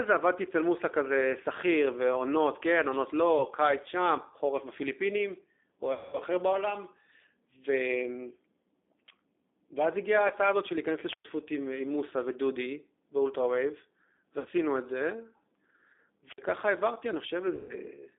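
The whole speech clip has passed through the G.729 codec, here the G.729A variant at 8 kbit/s. Each 10 ms frame is rebuilt from a vocal tract filter, a pitch predictor and a few pulses. The damage is plainly audible. The voice sounds rough and slightly synthetic. The band runs from about 250 Hz to 3.6 kHz, so it is thin and boxy, with no air on top.

At 3.38 s the first VoIP packet loss concealed by the speech codec appears. About 20 ms is missing, which fits one lost packet. The decoder repeats its last pitch and filter at falling gain, so a short buzzy smear lasts until 3.45 s. The longest gap starts at 5.93 s. About 200 ms is lost there, which points to ten packets in a row. The held tone fades, and the voice recovers weakly by 6.19 s. Another single-packet loss, about 20 ms, smears from 10.28 to 10.33 s.

At 11.06 s a wireless microphone squelch dropout occurs. The radio signal fades and hiss rises briefly. 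Then the receiver mutes for about 111 ms, leaving a hole of near silence. The voice returns by 11.3 s.

Concealment returns at 14.39 s. About 60 ms is lost, which fits three packets, and the voice is buzzy and weak until 14.48 s.

A second squelch dropout runs from 16.24 to 16.42 s. Its mute is shorter, about 52 ms, with the same rise of static before it.

The last loss begins at 17.55 s. About 140 ms is gone, which points to seven packets. The extrapolated tone decays and the voice stays distorted until 17.75 s.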